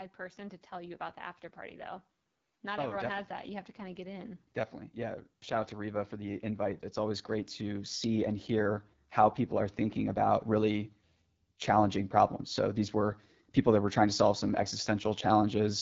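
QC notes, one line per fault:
Throughout: AMR wideband (HD Voice) codec. The speech sounds rough and raspy, a plainly audible coding texture that fits AMR-WB at 8.85 kbit/s. A pulse-driven vocal tract model rebuilds the voice, and shaped noise fills the top band. Nothing is heard above 7.6 kHz.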